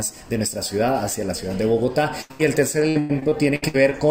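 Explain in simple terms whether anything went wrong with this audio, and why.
Two faults interrupt the audio. First, a burst of packet loss from 2.21 to 2.41 s: two back-to-back gaps where the receiver stretched the last sound into a fading buzz or hiss, then jumped ahead.

Next, repeated packet loss (robotic sound) from 2.89 to 3.93 s: eight short holes, the longest about 0.1 s, each patched the same way, covering about a third of that stretch. The rapid on-off patching makes it choppy rather than a single pause.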